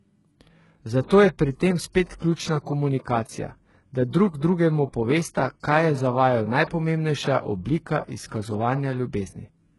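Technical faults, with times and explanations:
throughout, HE-AAC compression. Treble sounds gritty and metallic, s sounds lispy, nothing above 11.5 kHz. Likely band replication, fitting a heavily compressed, very low bitrate near 12 kbps.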